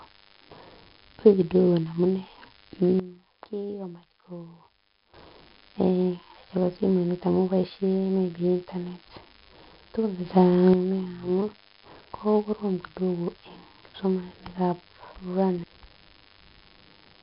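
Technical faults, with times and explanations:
Throughout, DECT cordless phone buzz: A thin, steady buzz at 100 Hz with many harmonics sits under the speech, roughly 30 dB down. A nearby DECT handset or base sends a radio burst every 10 ms. The audio circuit rectifies each burst into sound.
Throughout, 4-bit ADPCM compression: Every loud syllable carries gritty hiss that rises and falls with the level. Sharp onsets distort because the adaptive step cannot grow fast enough. Damage is heavy. Nothing is heard above 5.3 kHz, which points to a low sample rate and a bitrate near 44 kbps.
3.00–5.14 s and 10.25–10.74 s, sudden gain jump: At 3.00 s, speech and background noise drop together by 12 dB. They return at 5.14 s. At 10.25 s, both rise by 6 dB until 10.74 s. Each change is instant, with no fade. The likely cause is digital gain applied without a ramp.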